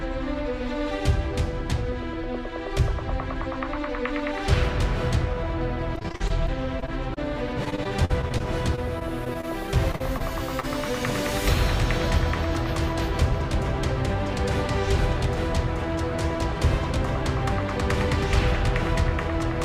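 From 5.95 to 7.19 s, and again from 7.65 to 10.23 s, there's repeated packet loss giving that robotic sound: packets keep going missing, and each hole gets papered over by dragging out the last bit of audio, up to about 45 ms at a time. It comes out choppy and robotic, with small pieces dropped. Then at 10.60 to 10.65 s there's a short stall from a late packet. The buffer ran dry, so the sound is held about 31 ms longer before carrying on, with nothing lost, just a brief smeared hang.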